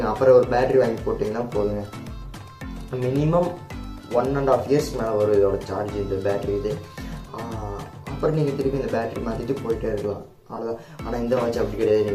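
At 10.56 to 10.59 s, Bluetooth LE Audio frames were lost, a 22.5 ms gap that fits three 7.5 ms LC3 frames. The decoder filled it by reusing the last spectrum with random signs, so the sound turns briefly into a noisy smear.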